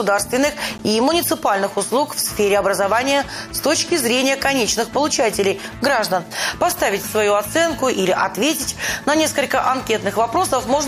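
At 0.78 s there is a gap between stream segments. The two segments' timestamps leave a 13 ms hole, filled with silence. It cuts the sound with hard edges.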